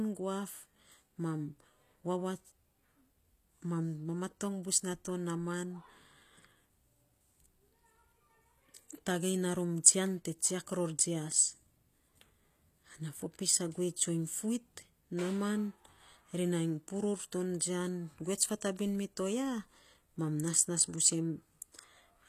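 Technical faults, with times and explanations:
Throughout, HE-AAC compression: the treble of the speech is bright yet synthetic, with s sounds gritty and metallic and nothing above 14.9 kHz, likely because upper bands were rebuilt from copied lower ones, which fits a low bitrate around 24 kbps.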